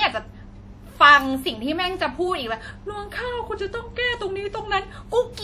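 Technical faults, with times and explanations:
throughout: WMA compression. The speech carries plainly audible transform-codec damage. Onsets and consonants ring, sustained passages sound washy, and a thin hiss swells and fades with the level of the speech. The quantisation noise is spread across long transform blocks, so it smears over tens of milliseconds around each event, and weak spectral detail has been discarded. The likely cause is Windows Media Audio encoding at a low rate, which fits a bitrate of around 48 kbps.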